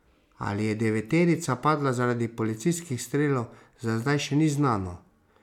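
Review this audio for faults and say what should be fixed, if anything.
Nothing to fix: no faults found in the speech.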